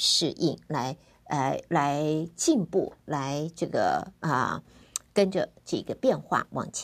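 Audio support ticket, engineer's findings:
No technical faults found in the speech signal; nothing heard points to a failing component or path.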